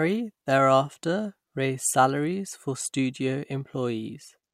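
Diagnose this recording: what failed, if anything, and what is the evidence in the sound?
From 3.28 s to the end of the clip the speech carries a rough 50 Hz buzz that stops when the signal stops. This points to a resampler restarted on every block in the driver or buffer stage, converting 48 kHz to 44.1 kHz in 20 ms blocks without keeping filter history, so every block edge gets a small error. On a waveform, tiny discontinuities appear every 20 ms; a spectrogram shows thin vertical lines at that spacing, present only under speech energy.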